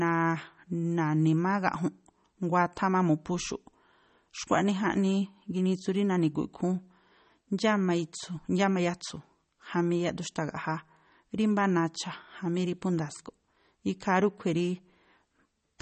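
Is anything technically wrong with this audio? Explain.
Yes. Throughout, the speech shows likely MP3 compression at a starved bitrate around 32 kbps: nothing above 8.4 kHz, and weak spectral lines flicker on and off, giving a watery, swirly texture with metallic chirps on s sounds.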